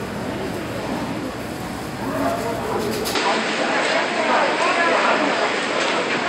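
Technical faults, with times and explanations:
3.15 s to the end: likely an input switched to a poorer device. From here nothing passes above 8.6 kHz, the level shifts by around 5 dB, and a faint new background noise appears, all at once with no gap. A filter alone wouldn't change level and noise together.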